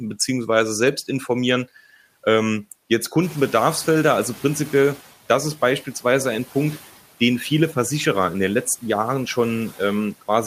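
At about 3 s the room noise behind the speech jumps up, by around 16 dB, to about 22 dB below the speech. From 3.22 to 5.02 s the noise suppressor is catching up. Its noise estimate lags behind the sudden rise. So the new noise passes through with little reduction at first. Over the next 1.8 s the estimate adapts, and the noise sinks by about 7 dB. It settles just before "das ist beispielsweise ein".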